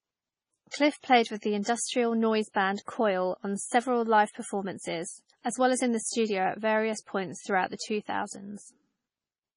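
Throughout the speech nothing is heard above 10.6 kHz, and weak detail flickers in and out from moment to moment, giving a watery, swirly texture with metallic, chirpy sibilants. This heavy damage is likely MP3 compression at a very low bitrate, which fits something near 24 kbps. A simple low-pass filter would remove the top end just as cleanly, but it would not produce this shifting, churning quality.

From 1.62 to 1.66 s, and again from 2.75 to 2.78 s, a short hiss comes just before a sharp onset, about 40 ms ahead in the first case and 29 ms in the second. Both onsets sound softened. This is pre-echo. The codec spreads its coding noise over a whole block, so the noise sized for the loud attack also fills the quiet just before it. Reverb or an echo trails after a sound, but this smear comes before it.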